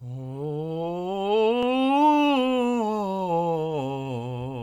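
No technical faults can be heard anywhere in the music.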